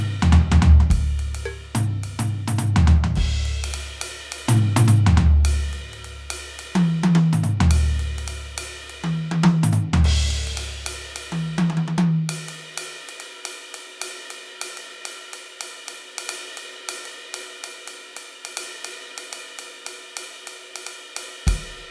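No technical faults can be heard anywhere in this music.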